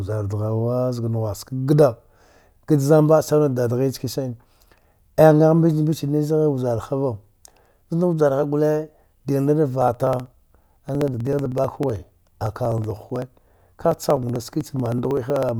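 Periodic USB or driver dropouts run from 9.82 s to 15.49 s of this speech. Every 63 ms, about 16 times a second, something stalls the USB transfer or the audio driver. Roughly a millisecond of audio is simply skipped, and the waveform on either side is butted together. Each splice leaves a small discontinuity, heard as a rapid, evenly spaced ticking that rides on the speech. It is audible while sound is present and fades out in the gaps.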